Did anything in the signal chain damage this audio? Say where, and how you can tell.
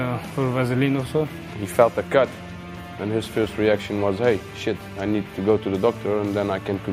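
No, nothing in the signal chain has left an audible mark on this audio. Every stage, from capture through to playback, passes the sound along without any damage that can be heard.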